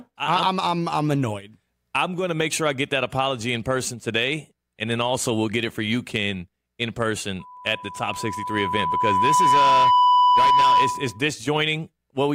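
At 7.39 s a loudspeaker feedback squeal begins. A single tone near 994 Hz swells over about two seconds. It reaches roughly 10 dB above the speech. The microphone is picking up its own loudspeaker, and the loop gain exceeds one there. It stops at 11.23 s.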